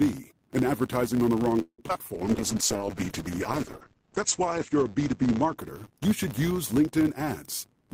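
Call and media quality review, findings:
Steady 100 Hz buzz under the speech for the whole clip, louder where the speech is louder. Filter restarted on every block. A processing filter starts each block from zero state. The start-up transient repeats at the block rate.

Buzzing hold, then a brief gap, 1.61 to 1.80 s, right after "advertising on the wrong". Call audio freeze, likely from packets held up in the network. The jitter buffer ran dry. The last sound was stretched, fading to about 80 ms of silence. Speech then resumes intact, about 171 ms late.

Two short smears at 1.88 to 1.91 s and 1.93 to 1.96 s. Short concealed packet loss in the decoder. About 40 ms, then 20 ms, of audio never arrived in time. Concealment continued the preceding sound and blended back, so short sounds may be missing.

Muffled, rough, watery speech from 2.16 to 6.58 s. Call bitrate drop in the encoder after the bandwidth estimate fell. 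Rate went from 32 to 9 kbps, at its lowest for about 2.3 s. Audio bandwidth narrowed from 20 kHz to 8 kHz.

Hurried speech at unchanged pitch, 7.64 to 7.86 s. Jitter buffer speed-up. The buffer held more audio than its target. Pitch-period pieces were cut repeatedly, around 40 ms in total. Playback ran at about 116% speed.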